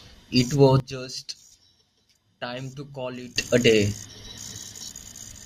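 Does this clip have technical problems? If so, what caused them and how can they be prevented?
Yes. A sudden gain jump cuts the speech and background noise together by about 18 dB at 0.8 s. Full level returns abruptly at 3.36 s. A gain setting was likely applied without a ramp. Smoothing every gain change over a few milliseconds prevents this.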